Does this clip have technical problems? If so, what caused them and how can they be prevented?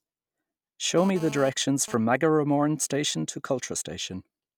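Yes. From 0.98 to 1.95 s there is GSM phone buzz, about 15 dB below the speech. A nearby 2G phone's data bursts, repeating 217 times a second, are rectified by the audio circuitry into a harsh rasp. On a spectrogram it appears as evenly stacked lines at 217 Hz and its harmonics, and the waveform shows a regular pulse train. Keep phones away from the recording chain, or switch them to flight mode.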